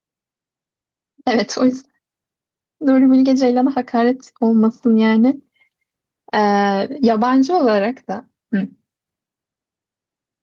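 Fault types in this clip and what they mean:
Gain pumping: throughout, the level is pulled down on each louder stretch of speech, swinging about 5 dB. It's likely a fast limiter or compressor clamping down on input gain set far too hot, which squashes loud and soft parts together.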